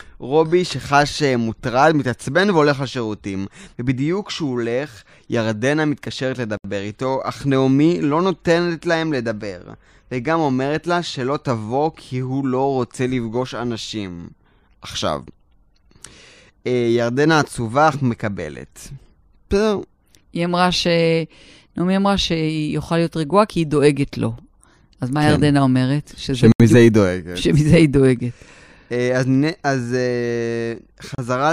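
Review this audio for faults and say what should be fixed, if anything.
The speech drops out to silence three times: at 6.57 s for 71 ms, at 26.52 s for 77 ms and at 31.15 s for 33 ms. It then carries on. These look like a likely Bluetooth stall, where interference delayed packets and the headphone buffer ran dry until resent data arrived. To prevent it, monitor over a wired connection, or keep the Bluetooth link short and clear of interference.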